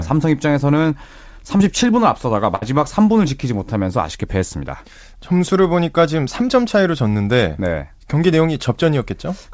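At 1.58 to 1.61 s there is a short concealed packet loss. About 20 ms of audio never arrived in time. The receiver continued the preceding sound for 14 ms, then blended back. It is heard as a brief smear or wobble.

At 2.55 to 2.64 s comes a burst of packet loss. Roughly 60 ms went missing. The decoder stretched the last sound across 62 ms while fading it. This gives a held buzz or dying hiss. Playback then jumps ahead, skipping the lost stretch.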